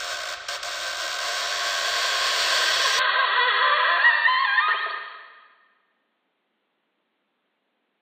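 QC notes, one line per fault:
2.99–8.02 s, input switched to a poorer device: the sound turns dull, with nothing above 4.4 kHz. No gap or level jump. Likely a narrower-band input.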